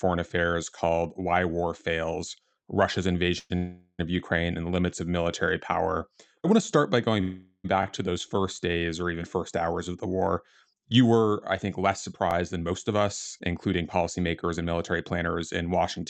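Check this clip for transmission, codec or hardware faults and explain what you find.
Three kinds of fault turn up in this speech clip: call audio freezes, repeated buffers and jitter buffer speed-up.

Call audio freezes occur at 3.39–3.52 s, 3.56–4.01 s and 7.21–7.66 s, the last right after "want to start by". Each time the last sound hangs on as a fading buzz, and the longer two end in a brief silence before the speech resumes with nothing lost. The likely cause is delayed packets draining the jitter buffer, which inserted roughly 0.1 s, 0.43 s and 0.43 s of filler.

Repeated buffers are heard at 7.83–7.85 s, just before "to those first days", and at 12.31–12.33 s, right after "were I think less". Each is a short click-like stutter, where a fragment of about 21 ms plays twice with a hard join. This happens when fresh audio misses its deadline and the device replays the previous block, which fits a 1024-sample buffer.

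Jitter buffer speed-up runs from 12.54 to 12.99 s at 109% and from 13.39 s to the end at 108%. The speech sounds rushed but keeps its pitch. After a backlog of audio built up, the receiver trimmed pitch-period-sized slices to cut the delay, removing about 50 ms in the first stretch. Throughout, the Opus call path limits the audio to 8 kHz.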